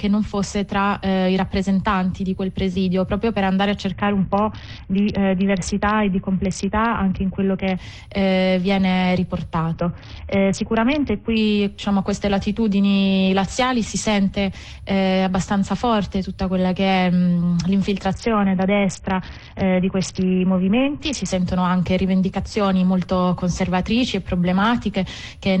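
A Bluetooth SBC bit pool drop, consistent with a fall from 31 to 6 (about 55 kbps), strikes at 3.9–7.8 s, 9.7–11.4 s and 18.1–21.3 s, dulling treble and adding gritty noise.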